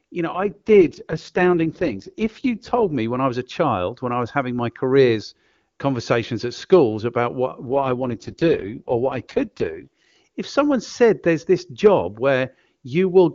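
From 0.33 to 2.95 s, after "you know", and from 7.68 to 10.16 s, after "at schools about what", an AMR rate drop turns the speech rough and synthetic, which fits a switch from 23.85 to 6.6 kbit/s. Bandwidth holds with no gap, and clarity returns at "me when I was" and "if someone said there's".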